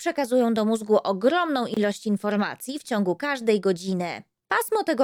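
The audio has a gap at a join of encoded pieces, from 1.74 to 1.77 s. The sound drops out in a gap of about 26 ms and then resumes where it left off. Nothing is lost. Extra silence has been inserted. The edges are smeared by the codec. The cause is two separately encoded sections joined without trimming. The encoder's start-up delay and the padding of the last frame both stayed in, leaving a short hole.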